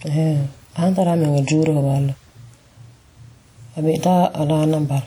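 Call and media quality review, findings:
Ringing, washy speech with hiss that rises and falls with the signal, throughout. Likely WMA compression near 48 kbps: long transform blocks smear quantisation noise over tens of milliseconds.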